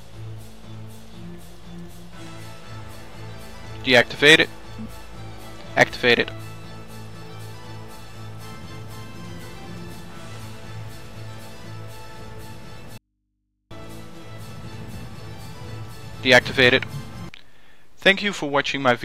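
At 12.98 s the sound cuts out abruptly, leaving only a low mains hum about 50 dB below the signal, then snaps back at 13.71 s. This audio dropout to a faint residue was likely a 0.73 s signal loss while the downstream input stayed live.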